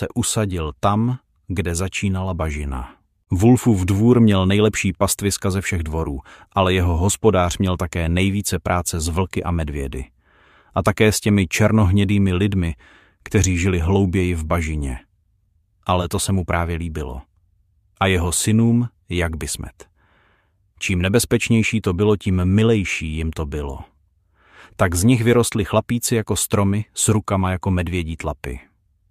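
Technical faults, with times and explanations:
22.55–23.68 s, channel delay (comb filtering): one channel slips behind the other by a tiny fraction of a millisecond, consistent with about a one-sample offset, and summing them cancels content near the top of the audible range, around 20 kHz, so the sound briefly loses some air and sheen.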